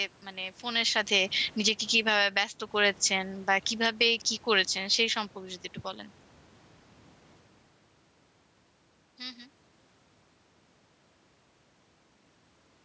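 From 0.9 to 2.44 s, the automatic gain falls. The control judges the input too loud, or its background noise too strong, and pulls its gain down by about 11 dB. Speech and room noise sink together, not just the voice. From 2.35 to 2.89 s, the automatic gain rises again by about 9 dB. Both swell back up at once. The second falling stretch runs from 3.1 to 5.24 s, a gentler dip of about 3 dB. It is interrupted from 3.98 to 4.39 s by a rise of about 3 dB. The background pumps along with each move, which marks these as gain changes rather than the talker shifting position, as happens around 0.5 s.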